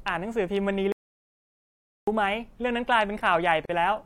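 At 0.92 s the speech cuts out dead and stays gone until 2.08 s, an audio dropout to silence. That's about 1.15 s of silence with no room tone, most likely the input dropping or getting muted while the recorder kept writing, so whatever was said there is lost.

Then from 3.65 to 3.69 s there's a gap at a join of encoded pieces: a 40 ms hole in otherwise continuous speech, with edges smeared by the codec. Two separately encoded chunks were spliced without trimming the start delay and end padding, so the sound picks up right where it stopped.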